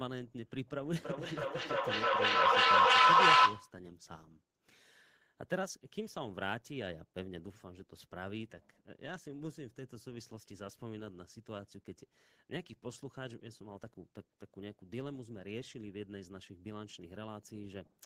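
From 0.98 to 3.79 s, two devices on the same call in one room form a feedback echo loop, one replaying what the other's microphone sent. The speech returns about every third of a second, thinner and ringing, building to about 18 dB above the speech.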